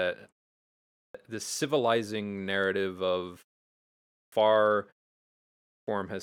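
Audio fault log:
0.71–1.15 s, 3.89–4.32 s, 5.36–5.87 s, clipped start after a pause: after pauses of about half a second, the output device sleeps and must wake again, swallowing 0.43 to 0.51 s of onset, so speech bursts in abruptly, just before "the civilizing narrative of" and just after it.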